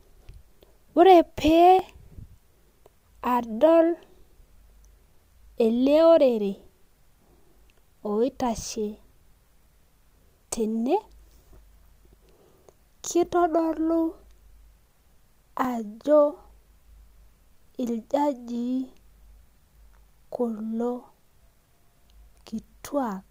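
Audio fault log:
1.79–22.59 s, clock drift buffer slips: likely two mismatched clocks, roughly 200 ppm apart, drop or repeat a few dozen samples every 3.47 s, giving regular clicks through the speech.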